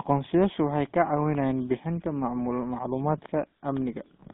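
It's a short speech clip that sounds like it has been through the GSM full-rate codec from start to finish. The band is squeezed to roughly 150 Hz to 3.6 kHz, so it has that thin phone-line quality, and the codec damage is plainly audible as a buzzy, gravelly roughness. That comes from the codec rebuilding the voice as a vocal-tract filter fed by a sparse, regularly spaced pulse excitation, which fits the old 13 kbps GSM coder.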